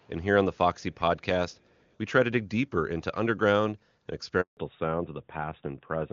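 A speech recording on a phone call, with three kinds of fault. The far end was likely playing the call on a loudspeaker, and its echo canceller did not fully suppress what its microphone picked up, causing an echo leak. A copy of the voice returns about 365 ms late, very faint, far below the main speech, in brief scraps at 0.0 to 0.09 s, 0.76 to 0.83 s and a longer stretch from 1.5 to 1.91 s. At 4.41 s the phone handed the call from one network to another, and no speech frames arrived while the link switched. This handover gap lets the voice fade out almost at once and leaves 160 ms of silence until 4.57 s, and whatever was said in that window is gone. When the new link came up, the call did not resume in HD Voice. It fell back to narrowband, moving from AMR-WB at 23.85 kbit/s to AMR-NB at 12.2 kbit/s, so from 4.57 s to the end nothing above 4 kHz survives. The voice loses its crisp upper range and sounds duller and rougher than the earlier wideband portion, with its clear high frequencies.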